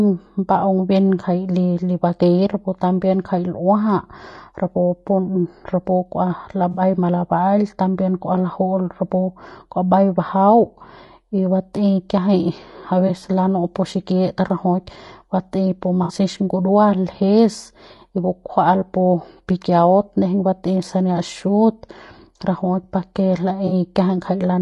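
From start to finish the speech sounds rough and grainy, with noise between the harmonics and a dull, synthetic top band. This is likely low-delay AAC compression. Its short frames resolve pitch poorly, and the damage fits a bitrate near 32 kbps.

AAC frame loss with concealment strikes at 6.71 to 6.81 s, 13.07 to 13.10 s, 16.03 to 16.13 s, and 23.67 to 23.72 s, just after "rajuik pa ke". The decoder fills the gaps from the last good spectrum, so each patch sounds smeared and noisy. The gaps last 60, 20, 60 and 40 ms, which fits three, one, three and two lost frames.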